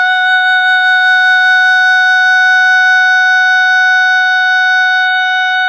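Nothing in this bit of music stands out as a technical fault; there's no glitch, dropout or distortion to point to anywhere along the way.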